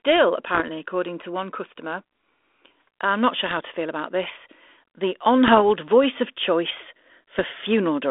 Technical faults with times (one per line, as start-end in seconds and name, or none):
0.49-0.71 bit errors on an ADPCM link
3.46-3.60 bit errors on an ADPCM link
5.45-5.59 bit errors on an ADPCM link
7.39-7.43 bit errors on an ADPCM link